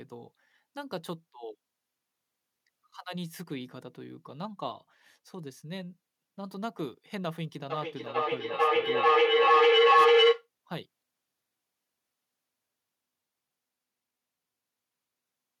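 Feedback howl runs from 7.7 s to 10.49 s. Sound from a loudspeaker is reaching a microphone on the same call and being sent back out, and each trip round that loop adds level instead of losing it. The repeats swell rather than decay and narrow to a tone of roughly 500 Hz, with the loop repeating about every 0.4 s. At its peak it is about 16 dB louder than the speech, then stops when the loop is broken.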